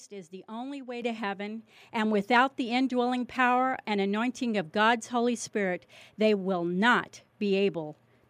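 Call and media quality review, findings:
Microphone volume stepped up at 1.02 s. Capture-side automatic gain control in the call software judged the microphone input too quiet and raised the device input volume in a single jump of about 8 dB. The speech and room background both get louder at that instant, an abrupt level step instead of a gradual ramp.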